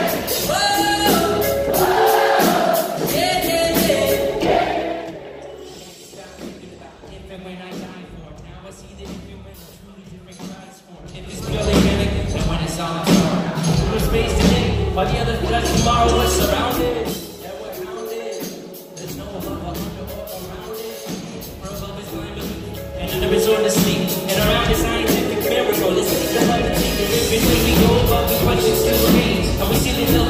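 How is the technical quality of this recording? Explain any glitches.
There's one glitch, in a single level move. From 10.96 to 11.52 s you get zipper noise: the level changes about 20 dB in coarse 3 dB jumps, around ten a second, with no smoothing, so each step clicks and the sound ticks as it moves.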